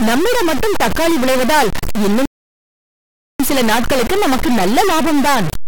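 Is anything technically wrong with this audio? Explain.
Yes, two faults. Throughout, a stuck bit: distortion, with noise filling the pauses, likely from one data bit held fixed, offsetting about half the sample values. From 2.25 to 3.40 s, a rebuffering stall: the speech cuts to silence, then resumes exactly where it stopped, adding about 1.14 s without losing anything.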